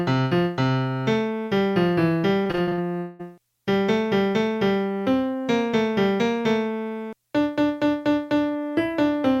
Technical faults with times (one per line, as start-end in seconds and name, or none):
2.43-2.79 repeated packet loss (robotic sound)
2.97-3.21 long network dropout